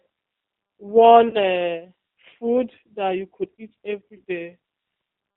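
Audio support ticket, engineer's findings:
G.729 codec, whole clip. Speech slightly rough and synthetic, consistent with 8 kbit/s G.729A. Spectrogram: hard ceiling at 4 kHz, nothing above. Mechanism: speech rebuilt from vocal tract filter, pitch predictor and sparse pulses per 10 ms frame, so fine detail is lost.

VoIP packet loss concealed by the speech codec, 1.29–1.37 s. 40 ms gap, which fits two lost 20 ms packets. Decoder extends its last pitch and filter, so the audio is stretched out and fades. Spectrogram: last frame's spectrum smeared forward; waveform: steadily shrinking envelope.

Same fault, 4.17–4.22 s. 20 ms gap, which fits one lost packet. Shorter stretched smear with faded level. Frame-to-frame dependency keeps the audio weak briefly after packets resume.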